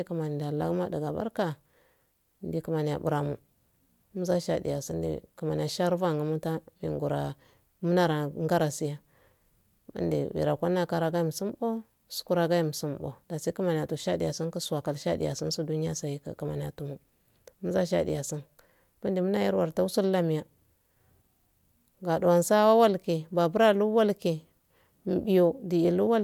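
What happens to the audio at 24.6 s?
At 24.6 s the speech plays through intact, with no dropout, click, distortion or other fault at that point.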